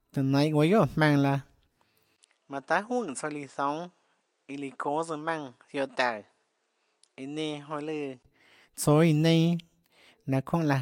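At 2.16 s there's a 20 ms gap, then the speech goes dull and noticeably quieter above a faint new background noise until 8.25 s, likely an input switched to a poorer device cutting everything above 10.5 kHz.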